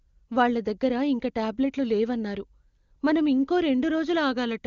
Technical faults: none

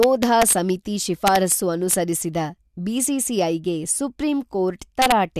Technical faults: integer overflow

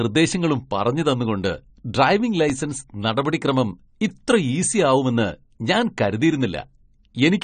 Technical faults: AAC compression

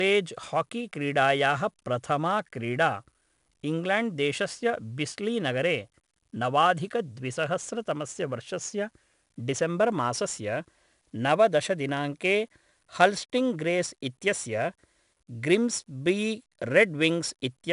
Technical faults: 4-bit ADPCM compression

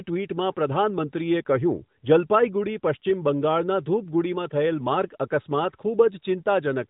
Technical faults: none

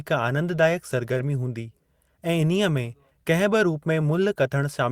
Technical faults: short concealed packet loss

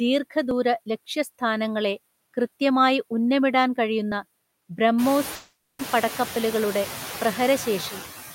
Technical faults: noise suppressor artifacts; dropped buffer (overrun); long network dropout

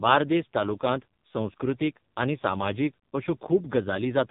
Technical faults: AMR narrowband mobile codec

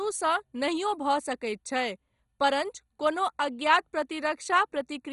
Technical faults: MP2 compression

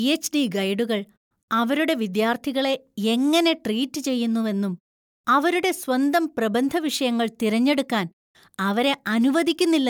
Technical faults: none

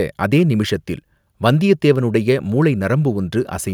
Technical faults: none

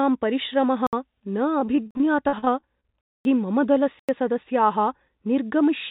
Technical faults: block of digital silence; repeated packet loss (robotic sound)

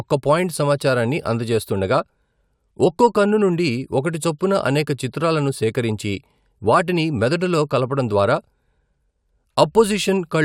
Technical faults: none

